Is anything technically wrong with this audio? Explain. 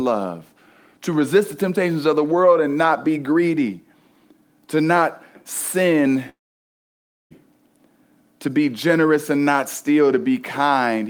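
Yes. From 6.29 to 7.33 s there is a long network dropout, likely a stall in packet delivery. The receiver extends the last sound into a brief fading buzz, then about 0.96 s of near silence follows, and the speech resumes with about a second missing.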